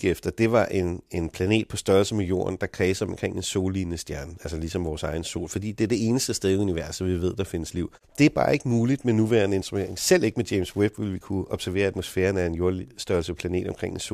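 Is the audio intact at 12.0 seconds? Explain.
No. Wi-Fi interference runs from 9.57 s to the end at 14.13 s. A nearby Wi-Fi radio's beacon, sent every 102.4 ms, is rectified by the audio circuit. It produces a faint ticking about ten times a second, roughly 40 dB below the speech.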